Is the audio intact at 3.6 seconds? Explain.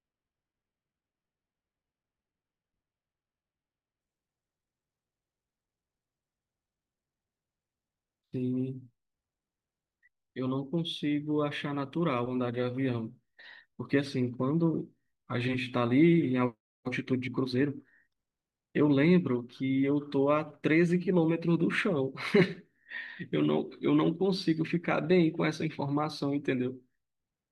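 No. From 0.0 to 4.0 s the adaptive stream is starting at a low bitrate, so treble is missing and codec artefacts are stronger, consistent with roughly 16 kbit/s AAC, before a sudden gapless step up.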